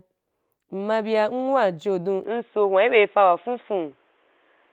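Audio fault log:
2.24–4.72 s, input switched to a poorer device: the system likely changed to a narrower-band microphone partway through, with no gap at the switch. The band, which reached about 12 kHz over the Opus call path before, now stops at 3.8 kHz, so the sound turns abruptly dull and boxy. The level shifts by roughly 5 dB, and a faint new background noise sits far below the signal until the end.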